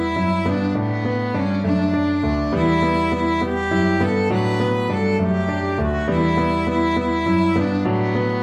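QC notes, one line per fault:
No faults found in this clip. Nothing here calls for a timestamp or a fix.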